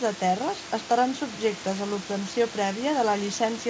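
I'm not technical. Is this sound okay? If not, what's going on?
Yes, no faults: the room noise in the background is part of the recording, and the call line's top end stopping at 8 kHz is normal for this connection.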